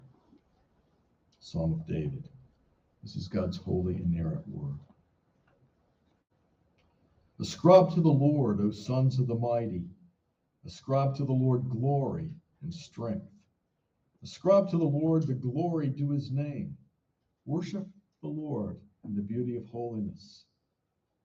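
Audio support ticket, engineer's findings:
Crude rate conversion, 3.42 to 8.86 s. Faint gritty, inharmonic fizz riding loud and high-frequency content. Resampler step from 32 kHz to 48 kHz using linear interpolation, no anti-imaging filter. Error tones are weak but audible.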